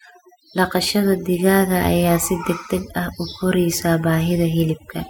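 Throughout the recording, overdone noise removal is audible: the reduction was set too aggressively, so frequency bands near the estimated noise floor are cut hard or muted. Pauses fall to near silence with twinkling specks.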